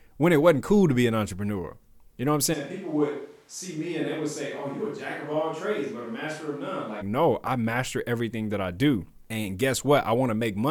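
A switch to a distant microphone, 2.55 to 7.0 s: the speech abruptly turns roomy and hollow, with thinner bass, a drop of about 10 dB and more room noise, likely because the close microphone's feed dropped out. The switch comes just before "no I master everything".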